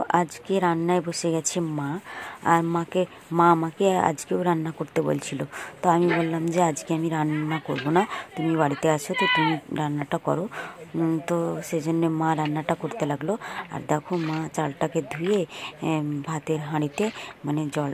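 No technical faults are audible anywhere in this audio.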